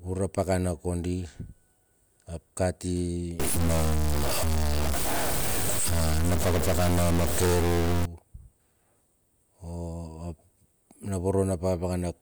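Speech, with a stuck bit from 3.39 s to 8.05 s, likely from a broken data line or converter. Unlike clipping, which only distorts loud peaks, this fault also fills the quiet pauses with noise.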